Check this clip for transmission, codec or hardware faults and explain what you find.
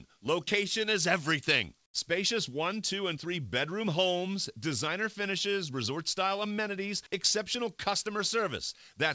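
One fault, on a call path whose audio stops at 8 kHz. From 1.86 to 1.94 s the background turns into flat hiss about 9 dB quieter, likely comfort noise in place of the background, synthesised while transmission paused.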